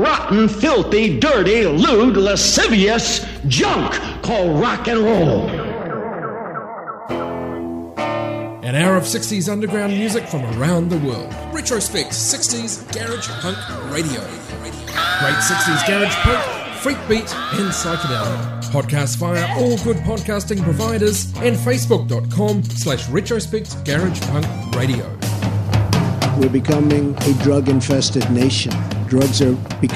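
No technical faults can be heard anywhere in the audio, and the signal stays steady and intact throughout.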